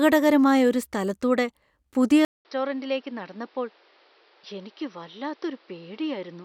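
After "ഒരു സ്ഥലത്തൂടെ പുതിയ", at 2.25 s, the speech cuts out for 200 ms and returns duller and about 10 dB quieter, with nothing above 5.8 kHz and new background noise about 30 dB below it. The input likely switched to a poorer device.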